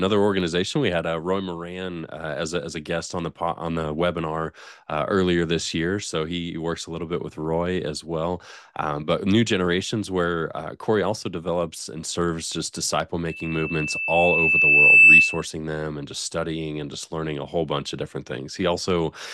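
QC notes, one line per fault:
13.29 to 15.45 s, loudspeaker feedback squeal. A single tone near 2.6 kHz appears and swells over about two seconds. At its height it sits roughly 15 dB above the rest of the sound. The microphone is hearing the loudspeaker it drives. At this one frequency the loop gain tops unity, so each pass round the loop makes the tone louder. It keeps rising until it ends at 15.45 s.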